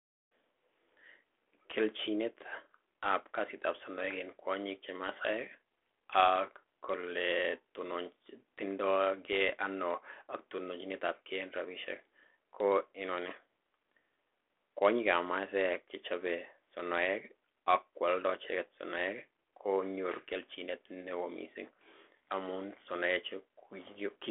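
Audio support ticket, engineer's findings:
No faults found.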